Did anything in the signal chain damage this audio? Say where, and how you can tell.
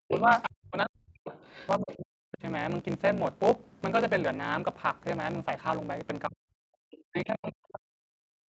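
Yes. A steady buzz at 54.4 Hz runs under the whole speech clip, and everything plays about 1.16 times fast at near-normal pitch. This is a block size mismatch (truncated) in the driver or buffer stage, consistent with 1024-sample blocks being written and their tails dropped by a shorter read.

The speech sinks sharply, by around 40 dB at its deepest, from 0.0 to 1.32 s, 1.78 to 2.42 s, 6.28 to 6.73 s and 7.08 s to the end. This is speech suppressed in double talk, likely the call's echo canceller ducking everything while the far side talked.

A second, fainter voice comes through from 1.3 to 1.68 s, roughly 20 dB below the talker, and again briefly from 6.91 to 6.98 s, about 25 dB down. This is the other side's voice leaking through, most likely loudspeaker echo the call processing failed to cancel.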